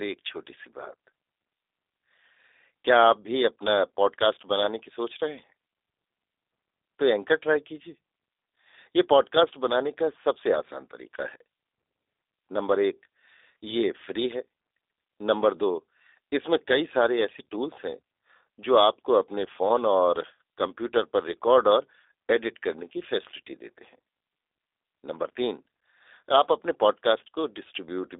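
From start to finish the speech sounds thin, boxed-in and faintly buzzy, with a slightly rough, synthetic edge that is plainly audible. Nothing survives above about 3.8 kHz, and the band sits roughly between 300 Hz and 3.7 kHz. This is G.729 codec damage, in its G.729A form, which fits an 8 kbit/s stream. The codec does not keep the waveform itself. It rebuilds the voice from a vocal-tract filter, a pitch predictor and a few coded pulses in each short frame.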